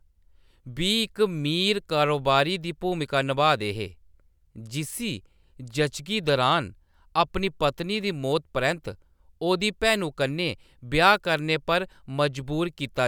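Nothing in the speech stood out as a technical problem on listening.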